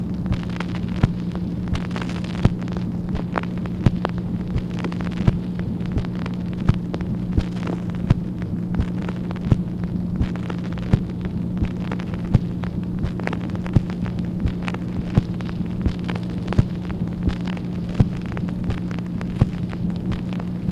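Nothing in this audio stands out as a technical fault, so there's nothing to walk through here.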